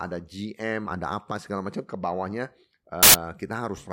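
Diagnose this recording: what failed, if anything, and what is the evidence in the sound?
The file's tag block, an embedded cover picture, was played as audio from 3.03 to 3.14 s, its compressed bytes producing a hard-edged burst of very loud white noise.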